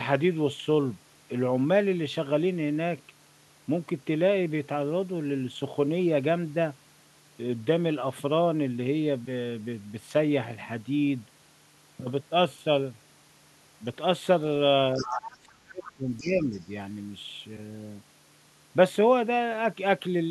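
From 14.96 to 16.59 s the talker's speech sinks by around 20 dB, thins and breaks up for about one and a half seconds. This is speech suppressed in double talk, likely from an echo canceller that, with both sides talking at once, turned down its own talker along with the loudspeaker echo. Within that stretch, faint scraps of a second voice come through at 14.96 to 15.17 s (about 15 dB under the speech), 15.84 to 15.91 s and 16.17 to 16.58 s, each quieter than the last. That is the other side's voice leaking through, likely loudspeaker echo the canceller left in the microphone signal.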